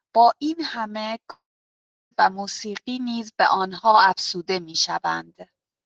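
From 1.31 to 2.13 s the speech turns to a fading buzz, then about 0.7 s of silence; likely a long network dropout losing 0.8 s of audio.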